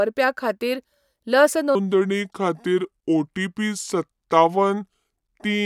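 From 1.75 s, right after "खातीर लस", the speech turns deep and sluggish through to the end, about five semitones lower. This section at the wrong speed runs at 0.742 times normal, likely played against the wrong clock, so pitch and tempo drop together.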